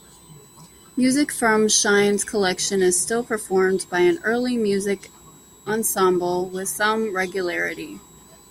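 From start to finish, a switching supply whistle sits under the speech: a thin high tone wandering between 3.81 and 4.04 kHz, roughly 30 dB down. A power supply is running in audible burst mode or beating with another one. On a spectrogram it appears as a wavering horizontal line near 4 kHz.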